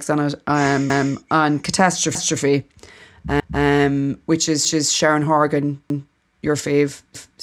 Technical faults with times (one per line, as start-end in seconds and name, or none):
0.90-1.15 overlapping chunks
2.15-2.40 overlapping chunks
3.40-3.65 overlapping chunks
4.65-4.90 overlapping chunks
5.90-6.15 overlapping chunks
7.15-7.40 overlapping chunks